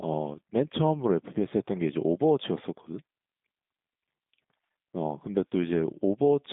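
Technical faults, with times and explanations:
Throughout, G.729 codec: the speech sounds thin, slightly rough and synthetic, with a plainly audible buzzy, processed edge. The band runs from about 150 Hz to 3.7 kHz, and nothing survives above 3.8 kHz, which fits an 8 kbit/s G.729A voice stream. That codec resynthesises each 10 ms frame from a vocal tract filter, a pitch predictor and a handful of pulses, which produces the artificial texture.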